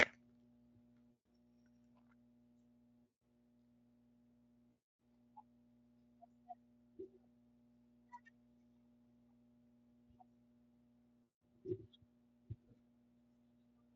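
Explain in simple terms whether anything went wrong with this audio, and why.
A steady low 60 Hz mains hum runs under the whole recording. Electrical power is leaking into the signal, from a ground loop or a nearby transformer.

The speech also breaks up four times, at 1.15, 3.07, 4.73 and 11.28 seconds, for 0.14, 0.16, 0.28 and 0.18 seconds respectively. This is VoIP packet loss concealed by the speech codec. Pieces of the transmission went missing, and the Speex decoder filled each gap by stretching the last sound into a fading buzzy tone or coloured noise. The voice stays weak or distorted just after each gap.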